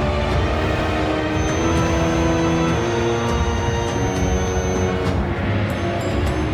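At 0.79 s and again from 4.07 to 4.09 s, damaged data in a compressed stream produces a brief blip. The decoder misreads corrupt frames and hunts for the next frame header.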